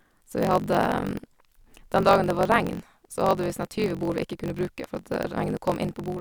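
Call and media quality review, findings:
Block size mismatch (truncated), whole clip: 46.9 Hz buzz, speech runs 1.12x fast. Block ends dropped between stages; rate fits a 1024-sample read block.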